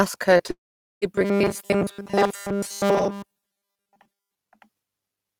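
Short concealed packet loss at 0.37 to 0.41 s and 0.47 to 0.51 s: about 20 ms went missing each time, and the receiver patched the gap by extending the previous sound, leaving brief smears.

Long network dropout from 0.51 to 1.04 s: the sound stops and roughly half a second is gone, with about 0.44 s of silence, likely because packets stopped arriving before playback resumed.

Robotic sound from repeated short buffers from 1.15 to 4.35 s: a rigid, metallic 200 Hz buzz, likely from the same short chunk of audio being replayed in place of most of the real signal, which fits a 5 ms buffer.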